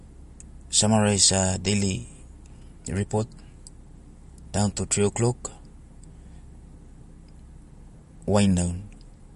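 Throughout the speech, nothing sounds above 11.2 kHz, and the sibilants swirl with a watery, chirpy edge, likely from MP3 compression at a low bitrate near 48 kbps. Unlike a plain low-pass filter, the weak frequency lines flicker from frame to frame.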